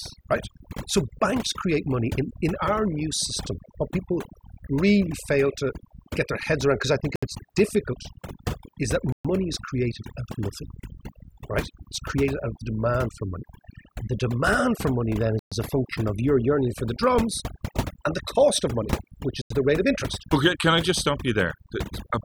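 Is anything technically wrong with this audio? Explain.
Yes, there are two problems. Overdone noise removal affects the whole recording. The background is pushed to near silence but left with twinkling specks. The reduction was set so aggressively that any frequency band close to the noise estimate is pulled far down or muted, which also removes quiet parts of the voice. A plain noise gate opens and closes as a whole, whereas here the damage is spread across individual bands, so it sparkles and warbles.

The speech also drops to complete silence four times: at 7.16 to 7.23 s (68 ms), 9.12 to 9.25 s (122 ms), 15.39 to 15.52 s (124 ms) and 19.42 to 19.51 s (89 ms). Each time it resumes after the gap. This is likely a Bluetooth stall, where interference delayed packets long enough for the headphone buffer to run empty and playback waited for the resent data. An edit cut would leave no silent gap, and packet-loss concealment would fill the hole with smeared sound. 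These gaps are true dead air.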